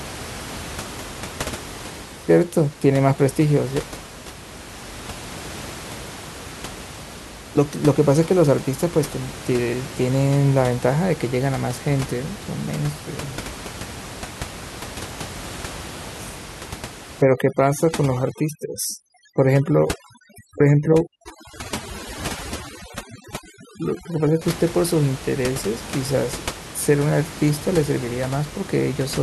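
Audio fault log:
17.22–24.41 s, overdone noise removal: noise reduction set far too strong cuts away each frequency band near its noise estimate, along with quiet speech detail, so the room noise, about 14 dB below the speech, drops and breaks up into twinkling specks.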